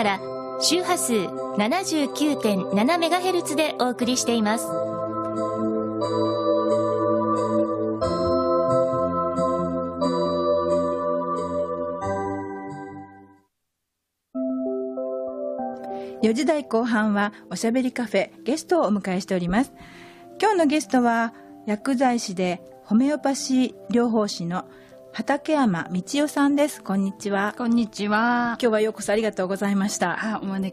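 No technical faults are audible anywhere in this audio.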